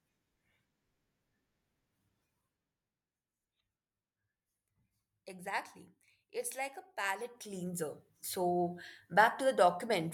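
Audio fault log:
6.96–7.94 s zipper noise: soft ticking rides on the speech while the level shifts about 10 dB in unsmoothed 2 dB steps, roughly seven per second.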